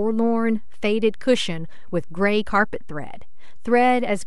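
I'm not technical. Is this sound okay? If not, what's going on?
No. DC offset runs through the whole clip: the speech waveform sits shifted off its centre line, so it isn't heard, but it wastes loudness room before distortion.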